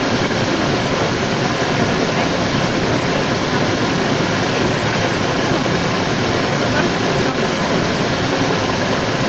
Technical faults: other side's voice leaking through

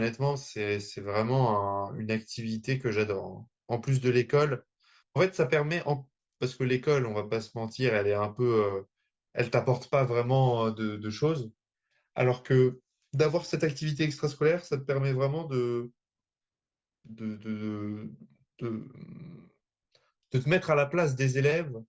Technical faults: none

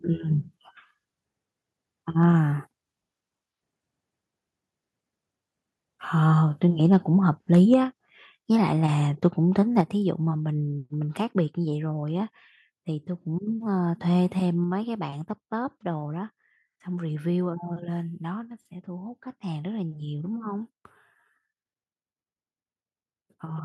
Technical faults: microphone overload; microphone volume stepped down

